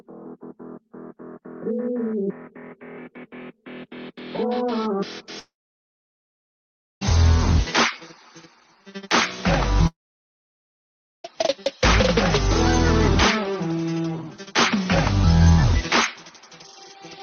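A likely long network dropout twice, at 5.39–7.03 s and 9.87–11.26 s: a brief fading tail, then silence, and the sound resumes with that stretch missing.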